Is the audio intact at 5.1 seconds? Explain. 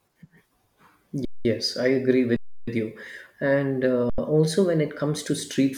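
Yes, at 5.1 seconds the speech runs through cleanly, with no dropout, click, distortion or other fault to be heard at that moment.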